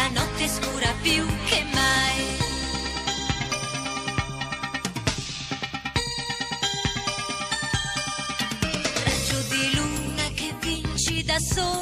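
No technical faults can be heard anywhere in this audio. Nothing in the sound points to a problem at any stage of the recording or playback chain.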